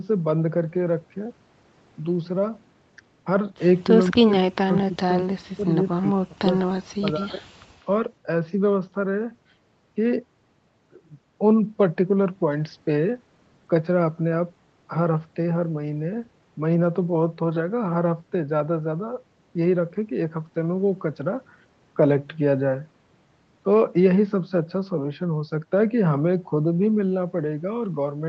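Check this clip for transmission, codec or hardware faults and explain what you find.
Two call faults are audible, both between 4 and 8 seconds.

Speech suppressed in double talk occurs from 4.09 to 5.72 s, 5.97 to 6.45 s and 6.65 to 7.58 s. The speech sinks by up to about 40 dB, likely because an echo canceller mistook it for loudspeaker echo.

An echo leak appears briefly at 6.59 to 6.64 s and 7.8 to 7.85 s. A faint copy returns 200 ms late, about 20 and 40 dB below the speech, likely from loudspeaker pickup the canceller missed.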